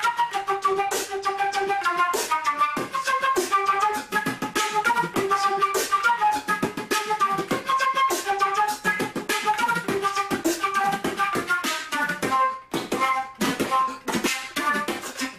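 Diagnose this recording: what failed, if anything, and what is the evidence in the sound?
Nothing failed; no faults heard.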